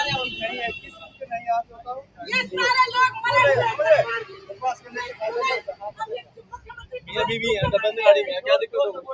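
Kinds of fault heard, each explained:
Noise suppressor applied to music or sounds: A noise suppressor built for speech stays active through the whole clip. It treats steady, sustained parts of the sound as background noise, and its gain keeps swinging by roughly 15 dB. Held portions and decaying tails sink while sharp onsets pass, so the sound pumps and thins. A compressor reacts to loudness, but this reacts to how steady the sound is. The top end stopping near 8 kHz is ordinary call microphone processing.
Sound cut by the noise suppressor: In particular stretches the suppressor took the sound itself for noise and pushed it down harder than elsewhere. This happens at 0.79–2.29 s, 4.24–5.21 s, 5.67–6.05 s and 6.21–7.12 s, with the deepest drops about 18, 16, 17 and 18 dB. Sustained or fading parts dip or end early, while sudden attacks still come through. Unlike a dropout, the sound is ducked rather than vanishing abruptly or completely.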